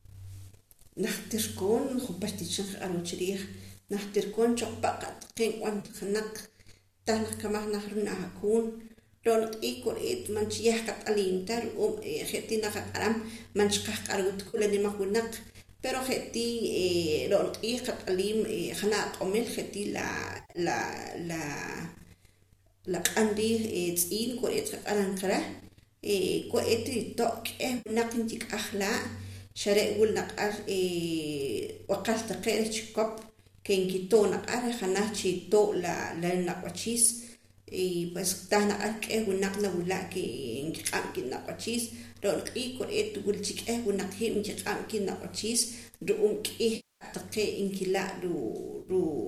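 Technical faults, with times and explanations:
5.81–5.96 s, 14.49–14.58 s, 20.37–20.59 s, 27.78–27.90 s, 46.76–47.05 s, 48.81–48.90 s: AAC frame loss with concealment. The decoder rebuilds missing 10 ms frames from the last good spectrum, likely the low-delay AAC, producing smeared noisy blurs. On a spectrogram these appear as harmonics blurring into noise. In the waveform, the 250 ms gap near 46.8 s sags in level.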